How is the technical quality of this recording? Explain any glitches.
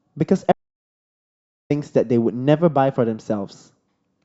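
There is one clear glitch in this speech recording. From 0.52 s to 1.70 s the sound drops out to silence, with no room tone at all, and then resumes mid-flow after about 1.18 s. This audio dropout to silence likely came from the input being lost, through a disconnected device, a failed link or a mute, while the recorder kept writing silence. Whatever was spoken in that stretch is gone.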